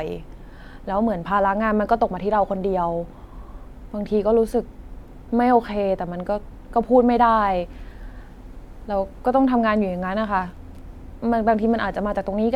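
Listening through the recording of speech, nothing stood out as a technical problem at any point.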